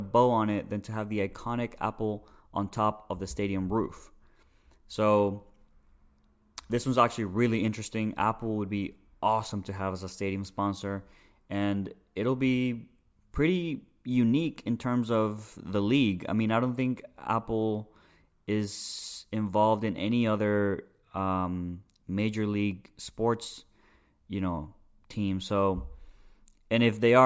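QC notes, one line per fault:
No faults found on this speech recording; nothing to log.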